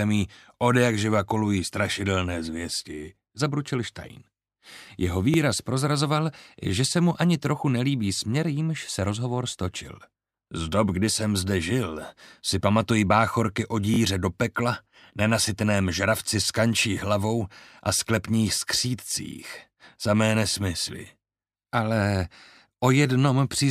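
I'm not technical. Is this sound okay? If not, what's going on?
No. There are two repeated buffer faults. At 5.34 s and from 13.94 to 13.98 s, a tiny slice of sound replays, once and then twice, heard as a brief click or stutter. New audio arrived late, so the player reused its last chunk, about 20 ms long.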